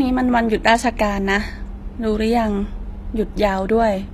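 From start to finish the speech carries plainly audible codec damage, likely from HE-AAC compression at a low bitrate, which fits roughly 24 kbps. The treble above the coded band is synthesised by copying lower bands upward, so s sounds come out gritty and metallic rather than crisp. On a spectrogram the upper region looks smeared and blocky, with harmonics misaligned across the crossover, and nothing appears above 14.9 kHz.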